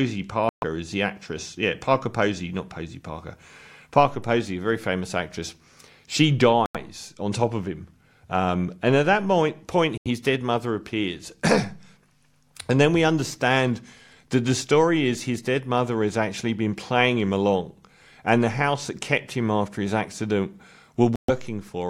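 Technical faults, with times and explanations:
0.49–0.64 s, 6.66–6.77 s, 9.98–10.07 s and 21.16–21.30 s, Bluetooth stall: the speech cuts to dead silence for about 132, 88, 83 and 128 ms. It resumes before "is the actress" and "on top of him", and stops after "him after his accident". Likely cause: radio interference delayed packets, so the headphone buffer emptied and playback paused until retransmissions arrived. The gaps are true silence with hard edges, not the smeared or warbling fill that codec error concealment would produce.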